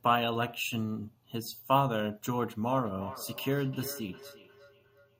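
From 2.77 s to the end of the speech, a feedback echo between two devices appears: each phrase returns roughly every 0.4 s, peaking about 15 dB below the direct sound. A second device in the room is playing back this microphone's signal, and the microphone picks it up again. The local echo canceller only removes its own device's playback. Unlike room reverberation, which smears into a diffuse tail, these are distinct delayed copies spaced evenly apart.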